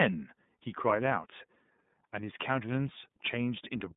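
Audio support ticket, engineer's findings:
iLBC codec damage throughout, plainly audible. Band limited to roughly 150 Hz–3.7 kHz, nothing above 3.8 kHz. Speech rough and slightly synthetic: each frame's excitation coded independently, consistent with 30 ms frames and the 13.33 kbps mode.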